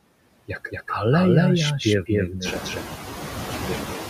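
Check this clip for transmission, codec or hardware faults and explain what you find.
Two faults run through the whole clip. Neither comes and goes.

The first is a doubled audio track. A second copy of the speech sits roughly 200 ms behind the first, at about the same level. It is full-band, with no decay and no room colour. The likely cause is the same signal being captured twice, once through a slower path, and mixed back together. The result is a hard, slapback echo on every syllable.

The second is noise suppressor artifacts. The suppressor treats steady background as noise and pulls those frequency bands down frame by frame. Here it cuts the noise by about 7 dB. In the gaps the background sinks, then swells back under the speech as the gain opens. The room noise climbs by about 13 dB at around two and a half seconds, which is part of the recording. From that point the noise ends up only about 8 dB below the speech.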